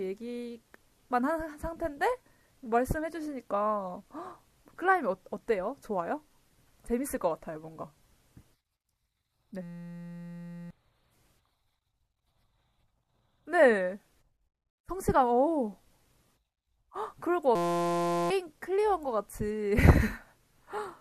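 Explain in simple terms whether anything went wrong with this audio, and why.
Something went wrong twice: a system hang loop, from 9.63 to 10.70 s and again from 17.55 to 18.30 s. The computer briefly froze, and the sound hardware kept replaying one tiny 5.8 ms scrap of speech, which fits a 256-sample buffer. Repeated 172 times a second, it becomes a steady buzz rather than a stutter or a simple dropout, and about a second, then about 0.7 s, of speech is lost.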